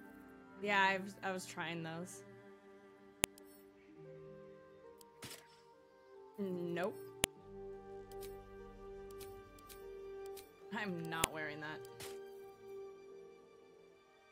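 At 3.24 s, 7.24 s and 11.24 s a sharp, loud click snaps through the sound: a file header played as audio. The clip was assembled from 4.0 s pieces whose WAV headers were never stripped, so each header's bytes are decoded as a brief burst of garbage samples at every join, regardless of the surrounding signal. On a waveform each shows as a thin, tall spike; on a spectrogram, a narrow vertical line spanning the full frequency range.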